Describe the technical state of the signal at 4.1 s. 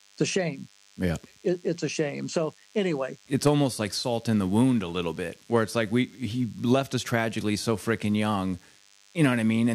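At 4.1 s the speech carries DECT cordless phone buzz, present through the whole clip. A nearby DECT handset or base radiates a short burst every 10 ms, which the audio circuitry rectifies. The result is a thin, steady 100 Hz buzz with many harmonics, sitting roughly 35 dB below the speech.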